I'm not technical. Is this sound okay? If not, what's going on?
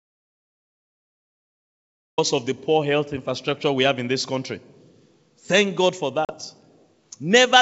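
No. The recording begins in dead silence, with not even faint background sound, until about 2.18 s, when the speech comes in partway through. This is an audio dropout to silence: the input was likely cut off, perhaps by a loose connection or an accidental mute, and the recorder kept writing nothing.

At about 6.25 s there is a brief hard-edged gap, roughly 40 milliseconds, and the speech comes back slightly off before settling by about 6.33 s. This is packet loss on an ADPCM call: a few small chunks of the call's data never arrived. The decoder, the part that rebuilds the sound, predicts each moment from the last, so it briefly fell out of step with the sender before catching up. The wideband phone coding carrying the call is clear.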